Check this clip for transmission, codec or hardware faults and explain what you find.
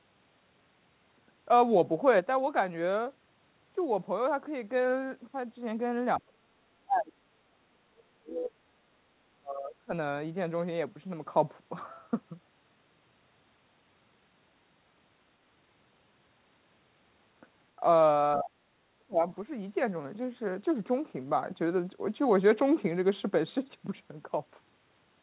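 The speech drops out in four places where both ends seem to talk at once. Speech suppressed in double talk, at 6.18–8.57 s, 9.33–9.91 s, 18.36–18.56 s and 18.95–19.23 s: the echo canceller likely confused the local talker with loudspeaker echo and attenuated both, so the speech falls by about 30 to 35 dB. The narrow band, with nothing above 4 kHz, fits a G.711 call path.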